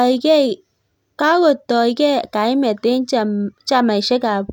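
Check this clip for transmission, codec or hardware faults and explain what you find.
Nothing stood out on listening to this speech recording.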